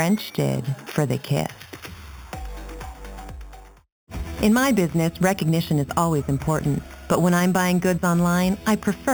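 Imaging from sample-and-hold upsampling runs through the whole clip. The sound points to an 8 kHz original raised to 44.1 kHz by repeating samples without smoothing. Mirrored copies fill 4 to 8 kHz, about 18 dB down. They give a metallic fizz that follows the level.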